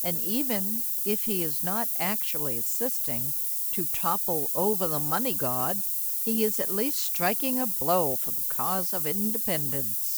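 A steady, thin hiss sits under the whole speech clip, rising sharply toward the top of the band and about 5 dB louder than the speech. It is low bit depth with noise shaping: the audio is held to just 4 bits, and the rounding error is fed back and pushed up into the high frequencies.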